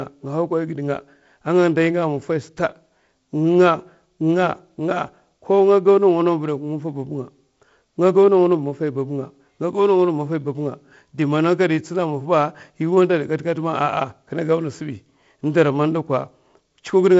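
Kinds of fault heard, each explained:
No fault can be heard in this speech: the signal carries the ordinary character of G.722 wideband telephone coding, with no content above about 7.7 kHz and a lightly noisier low band that fits a 48 kbit/s mode.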